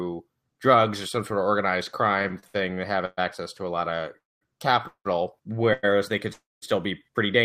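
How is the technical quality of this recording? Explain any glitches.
The recording carries packet-delivery faults from about 2 s onward: one stretch of stuttering, then four brief freezes.

Repeated stalls (stutter) run from 2.19 to 3.19 s, right after "some sort of organized". The jitter buffer ran dry seven times as packets arrived late or too slowly, and each time the receiver extended the last sound to bridge the wait. About 0.3 s is filled in this way, 30% of that second, with the longest gap 120 ms. Nothing is lost, but the speech drags and judders.

Call audio freezes occur at 4.18 to 4.43 s, at 4.87 to 5.07 s just after "to a lot of", at 5.73 to 5.85 s just before "they could still be", and at 6.33 to 6.64 s. Each is a hold of 100 to 289 ms where the last sound is stretched and then fades. The silent portion is 210, 80, none and 200 ms respectively. The likely cause is packets held up in transit, emptying the buffer. 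Playback then resumes where it stopped, inserting delay without dropping anything.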